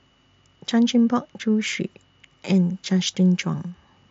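No technical faults occur at any point in this speech, so there is nothing to describe in time order.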